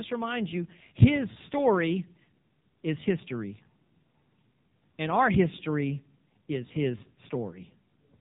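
The speech runs throughout through the AMR narrowband mobile codec at a very low bit budget, consistent with the 5.9 kbps mode, and is band-limited at 3.8 kHz. Each 20 ms frame is rebuilt from a vocal-tract model and sparse pulses, so the voice sounds muffled, buzzy and heavily synthetic.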